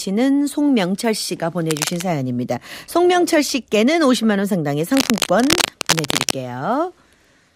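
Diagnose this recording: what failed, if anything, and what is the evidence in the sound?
Cable scratch noise appears twice in this speech clip, from 1.70 to 2.02 s and again from 4.94 to 6.32 s. Dense, uneven bursts of scratchy rustle sit over the sound, roughly 10 dB below the signal in the first stretch and a louder, more intrusive 5 dB or so below it in the longer second one. The stage is the analogue wiring: a worn cable, connector or control was likely being moved, making its contact resistance fluctuate rapidly.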